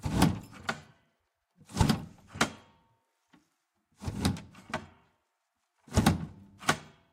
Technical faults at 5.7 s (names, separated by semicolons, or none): none